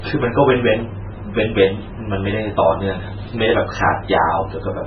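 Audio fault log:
Throughout: MP3 compression, and heavy at that. Nothing gets through above about 6.1 kHz, so everything sounds dull, with a watery, swirly wash where weak detail flickers in and out. It likely comes from a starved encode, something like 16 kbps MP3.
0.79 to 0.82 s: loud pop, a single sharp one landing roughly 5 dB above the speech, which carries on right underneath it. It sounds like a sudden voltage step got into the chain, likely from a plug, a switch or a driver glitch.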